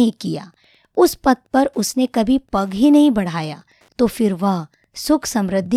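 Throughout the recording, a faint, regular ticking sits under the speech at roughly ten clicks per second, about 45 dB below the speech. This is Wi-Fi interference. A nearby Wi-Fi radio transmits its beacon every 102.4 ms. The audio circuitry rectifies that RF energy and turns each beacon into a short click in the audio band. The period is rigidly fixed, so the ticking keeps steady time no matter what the talker is doing.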